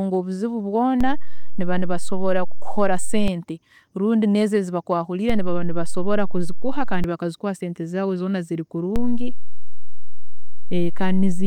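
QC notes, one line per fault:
1.01 to 3.28 s, 5.30 to 7.04 s, 8.96 s to the end: DC step, three times. The waveform's zero line jumps by about −14 dBFS in the first two and about −12 dBFS in the third. Each offset holds and then steps back at 3.28 s and 7.04 s, while the last one holds to the end of the clip. Each sudden jump is a near-instant, wideband edge, so it lands as a low thump or click at 1.01, 3.28, 5.30, 7.04 and 8.96 s, and the speech continues unchanged.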